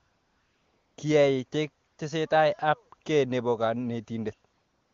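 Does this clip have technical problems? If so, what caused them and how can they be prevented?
Yes. AMR comfort noise replaces the real background from 0.00 to 0.97 s, from 1.87 to 1.97 s just before "tesetai ab kei nepo", and from 4.53 to 4.93 s. The sender's voice activity detector judged these stretches silent and stopped sending speech frames, so the receiver synthesised a smooth, steady noise from a coarse level and spectrum estimate, which switches in and out against the live background. The wideband speech between these gaps sounds clean, consistent with a high-rate AMR-WB mode. To prevent this, disable discontinuous transmission on the link, or tune the voice activity detector so that quiet passages keep being coded as speech.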